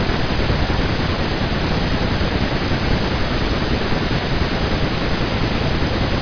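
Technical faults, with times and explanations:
Nothing stood out as a technical fault on listening to this recording.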